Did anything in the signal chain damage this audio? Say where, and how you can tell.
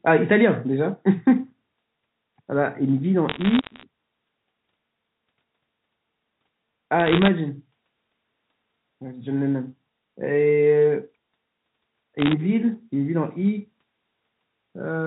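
Yes: sharp ticks and crackle over the speech at 3.29–3.84 s, 7.00–7.28 s and 12.19–12.33 s are bit errors on a digital phone line, where flipped sign or high bits corrupt individual G.711 samples.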